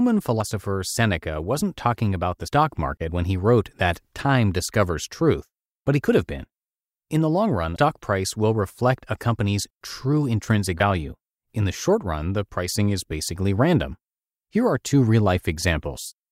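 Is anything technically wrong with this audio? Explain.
Yes. Twice the speech jumps forward. At 2.48 s, between "wasn't talking about the" and "market when he wrote", about a tenth of a second is missing. At 7.76 s, between "the long run" and "price will reflect a", around a fifth of a second is lost. These are compressed frames skipped: the decoder had no usable data for a few frames, consistent with 32 ms frames, so the speech jumps ahead by the length of the frames left out.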